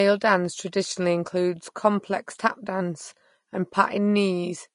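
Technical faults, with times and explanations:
Throughout, low-bitrate audio saved at a high bitrate: the speech has nothing above 10.5 kHz and carries the smeared, watery artefacts of heavy compression, likely from a low-bitrate encode, perhaps around 35 kbit/s, later re-saved as high-bitrate MP3. The larger file cannot restore what that first pass discarded, which is why its damage remains.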